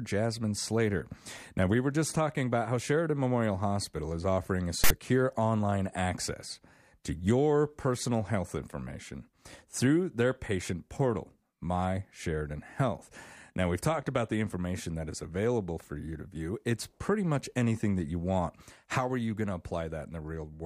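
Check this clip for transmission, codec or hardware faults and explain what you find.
One fault is present in the speech. From 4.84 to 4.90 s there is a loud, one-sided rasp with hard edges: file tags played as audio, where text metadata was decoded as samples.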